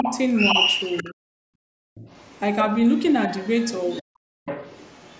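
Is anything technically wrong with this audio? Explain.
Yes, there are three related echo-canceller problems on this speech clip.

Other side's voice leaking through shows up at 0.0 to 1.14 s, 1.95 to 2.64 s, 3.39 to 4.02 s and 4.46 to 5.2 s. A second voice sits under the talker, quite loud at first, then faint, then moderately strong at the end. That's likely loudspeaker echo the canceller didn't fully remove.

Speech suppressed in double talk hits at 1.03 to 1.42 s and 4.02 to 4.47 s. The talker's voice dips hard, by something like 40 dB at worst, for a few hundred milliseconds each time. Both sides were probably talking at once, and the canceller likely couldn't separate them, so it pulled everything down.

Background gated by the echo canceller happens at 1.7 to 1.95 s. The room sound drops by about 38 dB and then comes back, because the canceller clamped the microphone while the loudspeaker was playing. 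The top end stopping at 8 kHz is just normal call microphone processing.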